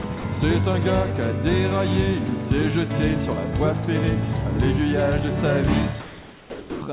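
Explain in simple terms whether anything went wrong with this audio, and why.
Sound dropped by the voice detector, at 0.02 to 0.04 s and again at 0.20 to 0.24 s: tiny gaps where the sound briefly vanishes into steady hiss, likely because the detector mistook it for background.

Comfort noise in place of the background, from 6.0 to 6.82 s: the natural background is swapped for a flat, featureless hiss, slightly quieter, likely because sending paused during a lull.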